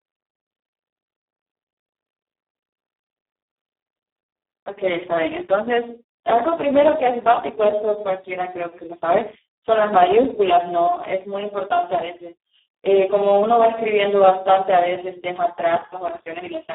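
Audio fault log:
Throughout, Speex codec: the speech sounds hoarse, buzzy and close to robotic, confined to a narrow 300 Hz to 3.6 kHz telephone band with nothing above 3.8 kHz. The damage points to Speex at around 4 kbps, which leaves too few bits to rebuild the voice's excitation faithfully.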